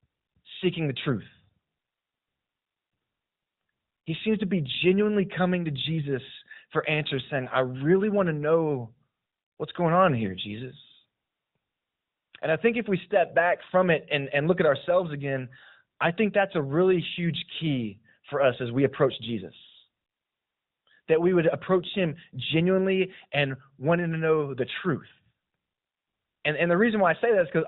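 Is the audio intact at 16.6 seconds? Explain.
Yes, the speech at 16.6 s is intact, with only the narrowband sound of the AMR mobile codec at 12.2 kbps running through it as it normally does.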